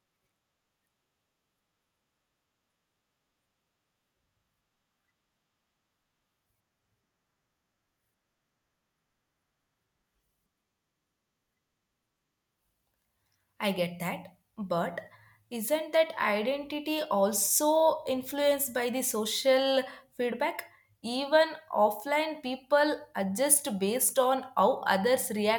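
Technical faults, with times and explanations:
Nothing in this speech recording stood out as a technical fault on listening.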